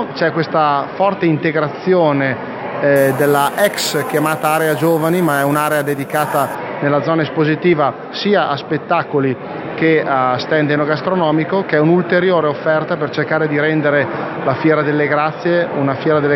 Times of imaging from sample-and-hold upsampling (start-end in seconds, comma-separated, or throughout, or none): 2.96-6.55